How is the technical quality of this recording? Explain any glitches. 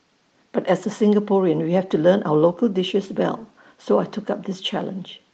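The recording's technical quality shows no glitches to explain.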